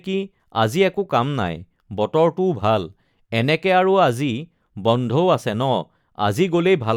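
No technical faults turn up anywhere in the speech, so there is nothing to set out in time order.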